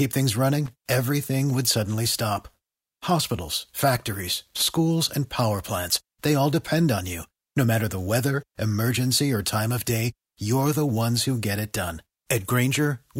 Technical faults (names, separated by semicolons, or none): loose connector crackle